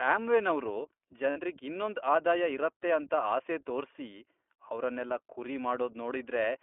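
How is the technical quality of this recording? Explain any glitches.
The quality is limited by a narrowband voice codec, with one brief dropout.

Throughout, the speech carries the sound of the iLBC codec. The audio is confined to a telephone band of roughly 300 Hz to 3.4 kHz, and the codec damage is plainly audible as a rough, slightly synthetic edge. The coder rebuilds each short frame's excitation independently, which fits its 20 ms mode at about 15.2 kbps. On a spectrogram, energy stops sharply at the top of the band.

From 1.30 to 1.39 s there are lost iLBC frames, about 60 ms missing, which fits three 20 ms frames. Where packets vanished, the decoder filled the gap by repeating the last pitch cycle mixed with noise, so it sounds like a held, faintly buzzy vowel. The waveform shows similar periods repeating, and the spectrogram shows flat, frozen harmonics. Because each frame stands alone, the speech recovers immediately afterwards.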